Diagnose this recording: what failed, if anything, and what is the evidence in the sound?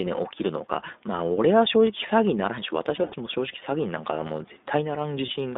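The codec stage is at fault: this is the iLBC codec throughout. The speech is confined to about 250 Hz to 3.7 kHz, with nothing above. A rough, synthetic texture is plainly audible. That fits iLBC's 15.2 kbps mode with 20 ms frames.

The network stage shows lost iLBC frames. From 2.96 to 3.15 s, about 100 ms is concealed, scattered over 160 ms. The longest gap is around 70 ms. A 20 ms loss follows at 5.26 to 5.30 s. The decoder repeats a buzzy pitch cycle, then recovers at once.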